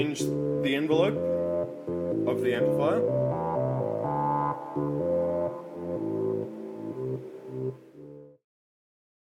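Nothing here counts as a fault; the only change in level is a smooth fade-out that begins at roughly 7.5 s and eases away to silence by 8.47 s, just as an editor would shape an ending.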